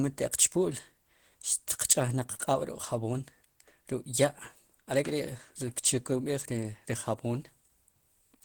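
Speech with plainly audible Opus compression throughout, likely from a low-rate hybrid-mode encode near 16 kbps: hoarse, grainy, muffled, with noise-filled bands showing as smeared texture on a spectrogram up to 20.1 kHz.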